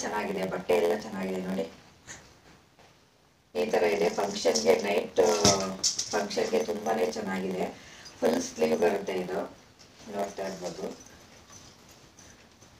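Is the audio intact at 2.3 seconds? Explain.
No. A block size mismatch (padded) runs through the whole clip, including 2.3 s. One stage hands over shorter blocks than the next stage reads, so the remainder of each block is filled with silence. That tiny gap recurs at 86.1 Hz, which fits a 512-sample read size, and is heard as a steady buzz. The inserted gaps also stretch the audio to 0.938 times its normal speed, while the timbre stays about where it should be.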